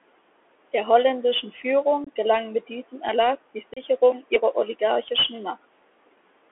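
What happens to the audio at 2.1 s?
Just before 2.1 s, from 2.04 to 2.09 s, the sound drops out for about 22 ms. The hole opens and closes abruptly, and the audio comes back quieter for a moment. This is unconcealed Bluetooth headset packet loss: a few short voice packets between headset and phone never arrived, and nothing rebuilt them, so silence or an idle pattern filled the gap.

The same moment also carries the Bluetooth CVSD headset codec's sound, which runs through the whole clip. The band is narrow, roughly 300 Hz to 3.4 kHz, so there is no air or brightness. Sibilants are scratchy, and a grainy hiss sits beneath the speech. CVSD encodes only an up-or-down step per sample at 64 kbps, and loud high-frequency content outruns the adaptive step, producing audible distortion.

Noise suppressor artifacts are present here too. The background room noise, about 19 dB below the speech, is pushed down by about 18 dB in the pauses and swells back under the speech. 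The suppressor estimates which frequency bands hold steady noise and attenuates them frame by frame, so its gain keeps shifting with the signal.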